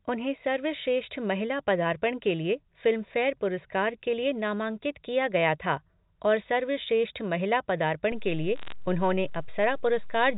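A DC step at 8.12 s shifts the waveform's zero line, heard as a low thump, and the offset then holds to the end while the speech carries on unchanged. Bit errors on a digital phone line follow from 8.56 to 8.72 s, where roughly three bits in a thousand flip on the G.711 mu-law line, each corrupting one sample and together making a brief burst of sharp ticks and crackle over the speech.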